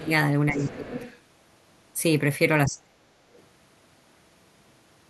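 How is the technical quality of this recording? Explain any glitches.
The recording has two kinds of echo-canceller trouble.

Speech suppressed in double talk, at 0.0–0.1 s, 0.52–0.97 s and 2.67–3.11 s: the canceller likely mistook overlapping talk for echo, pulling the voice down by about 15, 20 and 40 dB respectively.

Other side's voice leaking through, at 0.56–1.19 s and briefly at 3.35–3.42 s: residual loudspeaker sound likely escaped cancellation, at about 20 dB, then about 35 dB, below the speech.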